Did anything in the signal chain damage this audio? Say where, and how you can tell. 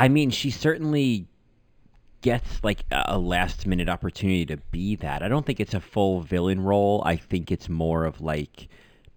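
Yes. The damage is at the sample-rate conversion stage, where this speech was raised from 11 kHz to 44.1 kHz throughout. The converter used linear upsampling, drawing straight lines between samples. That is a weak filter, so imaging from linear upsampling remains. A mirrored copy of the spectrum sits between about 5.5 and 11 kHz, roughly 30 dB below the signal. It adds a faint metallic shimmer on sibilants. The top of the original band also sounds dulled.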